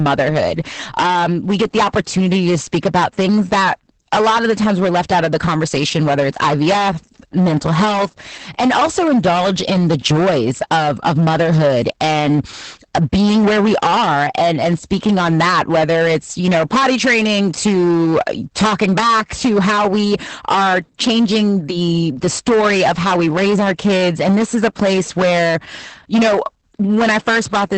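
Hard clipping runs the whole way through, overdriven by about 15 dB so roughly a fifth of the speech gets its peaks squared off, which gives every loud syllable a harsh fuzz. On top of that there's Opus voice compression throughout, with nothing above about 8.6 kHz and a hoarse, slightly robotic texture that fits a low bitrate of around 10 kbps.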